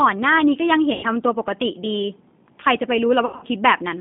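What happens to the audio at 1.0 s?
VoIP packet loss concealed by the speech codec hits from 0.93 to 1.06 s. About 100 ms of packets go missing, and the decoder stretches its last pitch and filter into a fading buzzy tone or coloured noise, staying weak briefly afterward. Underneath, the G.729 codec keeps the sound band-limited to roughly 150 Hz to 3.7 kHz, audibly rough and synthetic.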